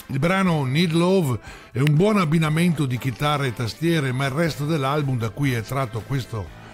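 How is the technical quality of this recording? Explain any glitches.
One glitch stands out: a single electrical switching spike at 1.87 s. It is a sharp, dry snap lasting about a millisecond, laid over the underlying sound and reaching close to full scale, at about -5 dBFS. The likely cause is a nearby switch, motor or static discharge arcing briefly and being picked up by the audio line. On a waveform it appears as one needle-thin vertical spike; on a spectrogram, as a narrow bright column spanning the full frequency range.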